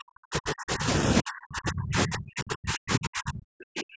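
Speech whose level collapses from 0.0 to 0.88 s and again from 1.21 s to the end, dropping by around 40 dB at its deepest. This is likely speech suppressed in double talk: with both sides talking at once, the echo canceller attenuated the talker along with the echo.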